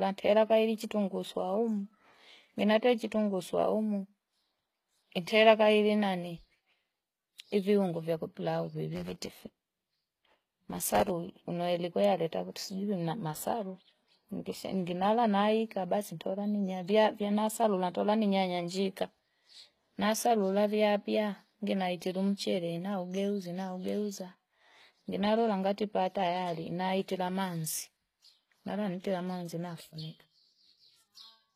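Throughout the whole clip the speech has the sound of low-bitrate HE-AAC compression, and the damage is plainly audible. Nothing is present above 14.9 kHz, and the treble below that ceiling is rebuilt by copying lower bands upward rather than carried through intact, so sibilants come out gritty or metallic. This likely points to a stream of about 20 kbps. On a spectrogram the top edge is a hard shelf at 14.9 kHz, and the upper bands show repeated copies of the patterns beneath them.

From 8.94 to 11.10 s a block size mismatch (truncated) sets in. One stage writes longer blocks than the next one reads, which fits 512-sample blocks whose ends are discarded at each handoff. The cut points recur at 91.9 Hz and produce a steady buzz at that rate. Because part of every block is thrown away, the speech runs 1.07 times faster through this stretch. The waveform shows a discontinuity at each block boundary, and the spectrogram shows evenly spaced vertical striations about 92 per second.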